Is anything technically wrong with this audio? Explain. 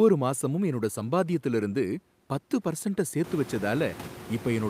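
No, nothing is technically wrong.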